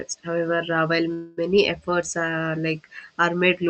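At 1.13 s the speech stops moving forward and what you hear is the last bit of sound stretched into a fading buzz or hiss for about 0.26 s, up to 1.39 s. That's a call audio freeze, likely from packets getting held up in transit so the jitter buffer ran dry and the receiver just kept extending what it had. When the packets turn up, the speech picks up exactly where it left off, so nothing is lost. A gap of roughly 240 ms has been added.

Just after, around 1.57 to 1.60 s, there's a skip ahead. Something like 70 ms of audio is simply gone, and the two sides are butted together with almost no gap, so the speech jumps forward abruptly. That fits the buffer having built up a backlog after the freeze and dumping audio to catch up on its delay.

From 1.90 to 2.32 s the jitter buffer slow-down kicks in. The receiver repeats single pitch periods over and over to rebuild its reserve, adding about 53 ms and running the speech at roughly 89% speed. 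The pitch stays put, but sounds get drawn out across that stretch. All of this rides on an Opus call path whose top end stops around 8 kHz, and the coding texture points to something like 48 kbps.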